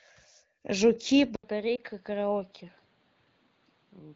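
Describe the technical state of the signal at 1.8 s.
At 1.8 s the sound is dull and boxy, with nothing above 5 kHz. The level is about 10 dB lower, with faint new background noise. This most likely reflects an input switched to a poorer device at 1.36 s, after a short 80 ms silence.

From 1.75 to 1.80 s, one lost AMR speech frame of 20 ms causes a brief dip. The decoder repeats the last good settings at fading gain.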